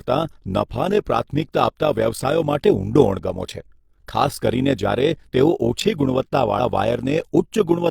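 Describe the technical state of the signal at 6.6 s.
Between 6.55 and 6.60 s, compressed frames were skipped: the decoder never played a block of the coded stream, either because it was missing or because it was rejected as damaged. The audio jumps forward by about 40 ms, which fits a single lost frame of roughly 43 ms.

Underneath this, and throughout the clip, is overlap-add ripple. The speech was split into windowed frames and rebuilt with an overlap that does not add up to a steady gain, so the level swells and dips once per frame, by about 11 dB, at a rate of around 50 Hz. At 6.6 s this is heard as a fast, rough flutter, a tremolo over the speech.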